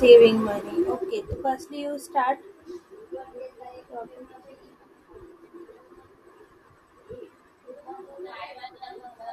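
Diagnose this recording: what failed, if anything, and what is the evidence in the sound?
Zipper noise at the driver or buffer stage: from 0.50 to 1.33 s the speech level drops by roughly 15 dB in 2 dB steps, around fifteen per second, each step leaving a small click. The gain is being updated per block without interpolation.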